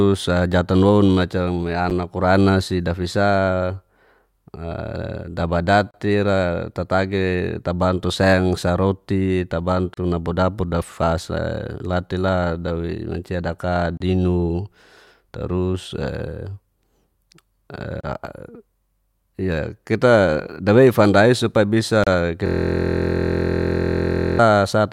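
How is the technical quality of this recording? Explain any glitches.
The speech is broken up by two kinds of glitch: repeated brief dropouts and, near the end, a mechanical buzz.

Short silences cut into the speech at 1.9 s (about 8 ms), then at 5.91, 9.94, 13.97, 18.0 and 22.04 s (32 ms each), recurring every 4 s. Each is a gap at a join of encoded pieces. Separately encoded segments were spliced without trimming the encoder's start delay and end padding.

From 22.47 to 24.39 s the speech turns into a steady buzz at about 43 Hz. This is a system hang loop. While the system was frozen, the audio hardware kept replaying one 23.2 ms stretch of its buffer dozens of times. That length fits a 1024-sample buffer.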